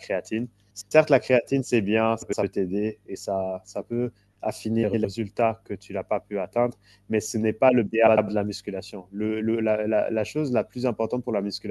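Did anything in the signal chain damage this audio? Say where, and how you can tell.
Yes, frames out of order in the network stage at 0.70–0.92, 2.22–2.44, 4.83–5.05 and 8.07–8.29 s. Two 104.5 ms halves swap, leaving a spectrogram discontinuity at each of three joins.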